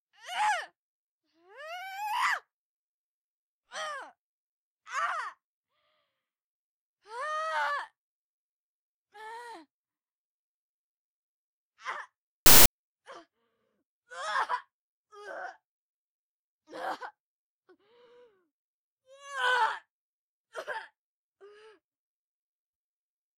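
Samples built from the wrong bytes appear from 12.46 to 12.66 s, a burst of about 0.2 s. For that stretch the reader combines the bytes of each sample incorrectly, whether by slipping one byte out of step, reversing their order or misjudging alignment, so the rapidly fluctuating low-order bits end up as the most significant part of every value. The result is a sudden blast of loud, harsh broadband noise that covers the sound.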